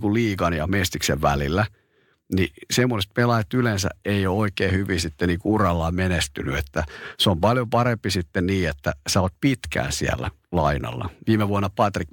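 No technical faults are audible.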